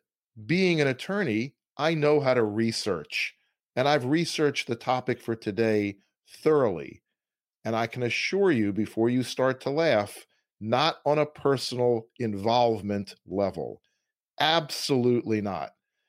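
Speech, with no technical faults to point out.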